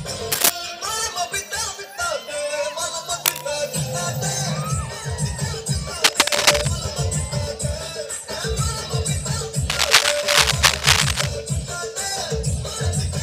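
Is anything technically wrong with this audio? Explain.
Yes. Cable scratch noise occurs at 0.32–0.50 s, 3.25–3.41 s, 6.04–6.68 s and 9.70–11.29 s: rough, uneven bursts of rustling above the sound, loudest in the first. A worn connector or lead being moved, rapidly varying its contact resistance, is the likely cause.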